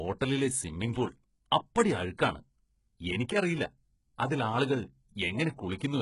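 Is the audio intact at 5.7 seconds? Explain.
No. At 5.7 seconds the speech carries heavy damage from what is likely HE-AAC compression, present throughout the clip. The encoder appears to have spent its bits on the lower spectrum and rebuilt the treble by copying lower bands upward. The damage level fits a bitrate near 12 kbps. That synthetic top end, ending sharply at 11.1 kHz, has harmonics that fail to match those below the crossover, so sibilants sound gritty, lispy and metallic.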